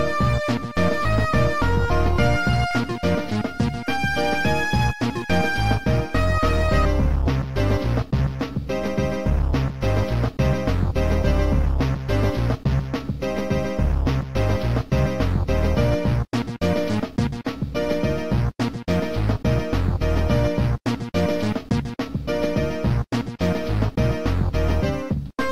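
Nothing in this recording stands out as a technical problem; the audio simply runs along without anything going wrong along the way.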